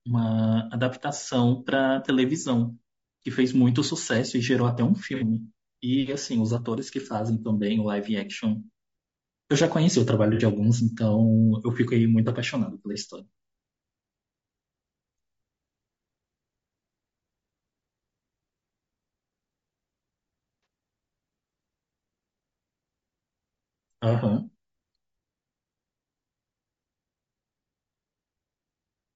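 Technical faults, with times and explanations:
throughout: low-delay AAC compression. The speech sounds rough and grainy, with noise filling the gaps between harmonics and a thin, synthetic-sounding top band. This is likely AAC-ELD: its short frames resolve pitch poorly, and the damage fits a bitrate around 32 kbps.
5.15–5.24 s, 10.34–10.42 s, 12.92–12.97 s, 20.63–20.66 s: AAC frame loss with concealment. Each gap is briefly smeared and noisy where the decoder rebuilds missing audio from the last good spectrum. The first two gaps span about 60 ms and the last two about 30 ms, too short to fade into silence.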